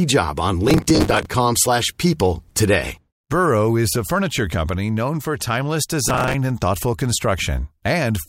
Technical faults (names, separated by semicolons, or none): processor overload crackle